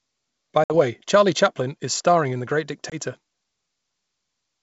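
A speech clip carried over G.722 wideband coding, which sounds like the full 64 kbit/s mode, shows packet loss on an ADPCM call twice: 0.64 to 0.74 s, with 60 ms dropped (a few packets), and 2.90 to 2.95 s, with 20 ms dropped (about one packet). Each gap is hard-edged silence. Afterward the decoder's adaptive predictor and step size no longer match the sender's, so speech resumes with brief distortion.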